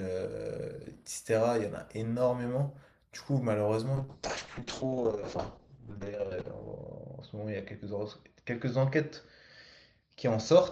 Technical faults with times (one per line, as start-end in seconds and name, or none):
3.97-10.72 call bitrate drop